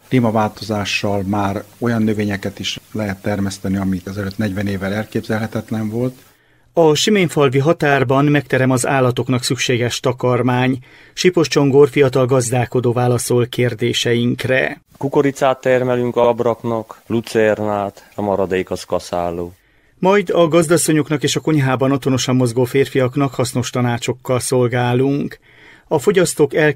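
At 24.21 to 24.24 s, repeated frames cause a brief stutter. One 32 ms block plays twice, adding 32 ms.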